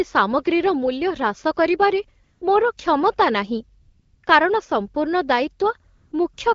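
A speech clip carried over a wideband phone call. It has AMR comfort noise in four pauses: 2.23 to 2.41 s, 3.81 to 4.23 s, 5.95 to 6.11 s, and 6.33 to 6.37 s. In each, the phone judged the talker silent and stopped sending speech. The receiver filled the gap with smooth synthetic noise. The real background drops out and steady hiss switches in. The lightly coded HD Voice speech around these pauses sounds clear, which fits a rate of about 12.65 kbit/s.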